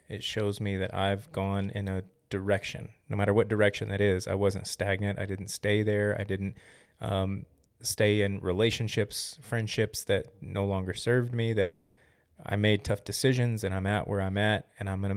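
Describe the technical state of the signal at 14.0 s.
At 14.0 s the speech signal is intact, with no technical fault present at that moment.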